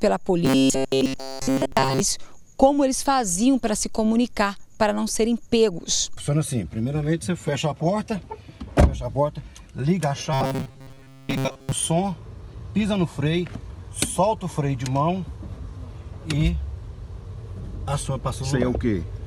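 From 0.45 to 2.01 s and again from 10.33 to 11.72 s, the audio turns into a rigid metallic buzz at 134 Hz: robotic sound from repeated short buffers. Most of each stretch is likely a looped fragment of about 7.5 ms, with the real audio between repeats skipped.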